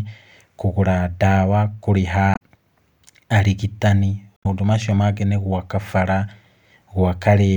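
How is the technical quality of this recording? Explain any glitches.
The speech is marred by two short glitches. Damaged data in a compressed stream occurs at 2.31–2.41 s and 4.34–4.46 s: corrupted bytes make the decoder misread frames and lose sync while hunting for the next frame header, producing a brief chirp, squawk, click or short hole.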